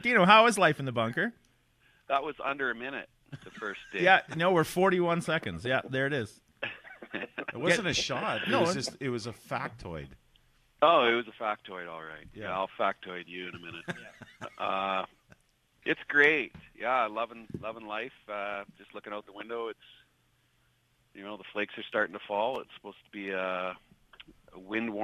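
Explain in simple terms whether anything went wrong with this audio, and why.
There's a small stutter problem from overlapping chunks. The audio was handled in 4-second pieces, and each new piece started a touch before the previous one finished, so about 13 ms of sound gets played twice at the seam. You hear it as a quick click or hiccup at 2.49, 6.50, 14.53 and 22.56 seconds. It's brief, a regular little tick at each seam.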